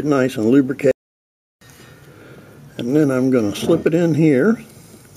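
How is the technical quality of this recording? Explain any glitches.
One glitch stands out: a playback stall from 0.91 to 1.61 s. The sound cuts to silence for about 0.7 s mid-flow, likely because the player ran short of data, then resumes.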